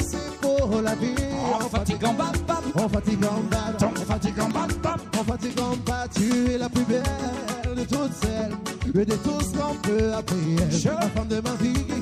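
At 4.50 s a sharp snap lands on top of the sound, peaking around -20 dBFS, and at 10.32 s a second, louder one follows at around -15 dBFS. Both are electrical switching spikes: each lasts only a few milliseconds and sits on top of the audio rather than replacing it. This is likely an arc from a nearby switch, motor or static discharge coupling into the audio line as a brief voltage transient.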